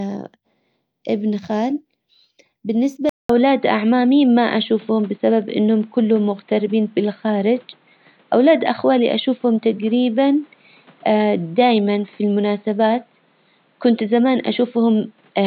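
At 3.09 s the speech drops out for a short gap of about 200 ms, then returns duller and boxier, with nothing above 4.4 kHz, a level shift of roughly 5 dB, and a new background noise floor about 40 dB below the speech. This narrower, differently coloured sound lasts to the end. The likely cause is the input switching to a poorer device, such as another microphone or a headset's call profile, with its own bandwidth, tone and noise.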